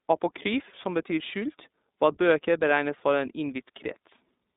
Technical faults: iLBC codec

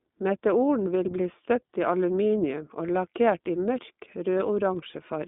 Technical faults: iLBC codec; lost iLBC frames

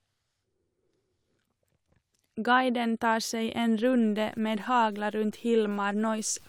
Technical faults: low bit depth without dither

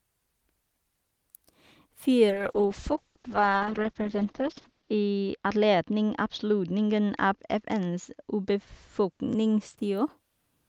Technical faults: call bitrate drop

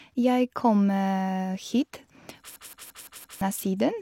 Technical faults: system hang loop

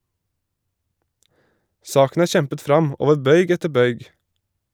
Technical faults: none

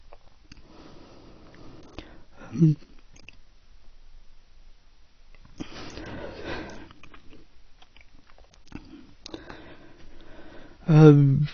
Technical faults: AAC compression

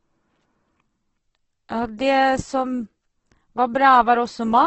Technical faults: Opus compression

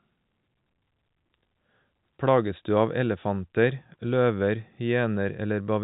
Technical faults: none

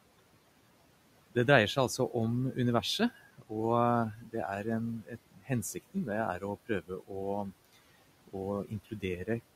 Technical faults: noise suppressor artifacts; speech cut by the noise suppressor

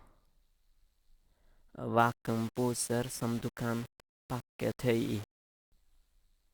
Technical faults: low bit depth without dither

